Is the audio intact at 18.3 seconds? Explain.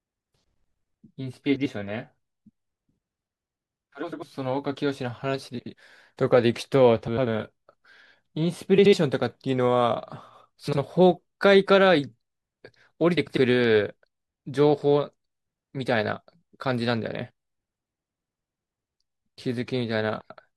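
Yes, at 18.3 seconds the speech plays through with no fault.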